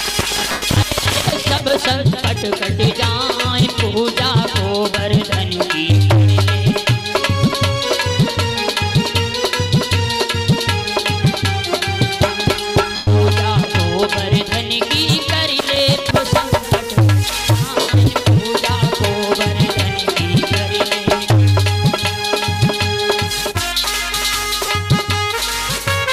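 Lost LE Audio frames occur at 0.51–0.62 s, 12.96–13.08 s, 17.80–17.89 s and 24.66–24.68 s. The Bluetooth link dropped runs of audio frames, in gaps fitting 7.5 ms frames, and the LC3 decoder filled each hole by repeating the last spectrum with scrambled signs, then fading it. The longer gaps, around 80 to 110 ms, become a brief noisy smear that sags in level. The last, about 23 ms, is a quick grainy blip over the light codec texture.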